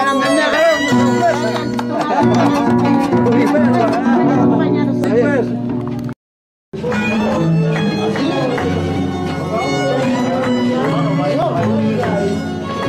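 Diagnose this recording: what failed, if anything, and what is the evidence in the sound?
The sound skips at 0.53, 5.04, 6.73, 8.96 and 11.42 s. No silence fills the gap. About 20 ms vanishes at the first and last, about 50 ms elsewhere. This is likely a dropped buffer (overrun) at the driver stage. Unread samples were overwritten.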